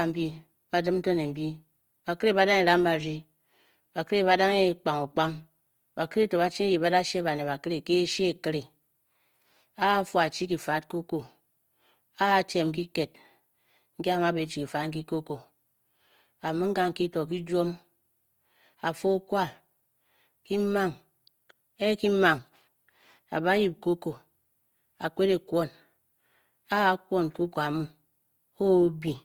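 A speech recording whose sound throughout is rough and grainy, with tonal parts of the voice turned noisy rather than swirling. This is likely Opus compression in its music (CELT) mode, at a rate that fits roughly 24 kbps: each band's energy is kept, but starved bands are refilled with folded or noise-like content. A spectrogram shows few holes, just speckled, grainy texture across the bands, still reaching fullband up to a flat ceiling at 20.2 kHz.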